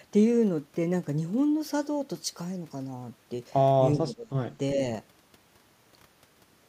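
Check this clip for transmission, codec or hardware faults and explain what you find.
One fault is audible. From 3.95 to 4.34 s, the speech dips sharply, by around 20 dB, then recovers. This is likely speech suppressed in double talk: an echo canceller confused overlapping talk with echo and attenuated it.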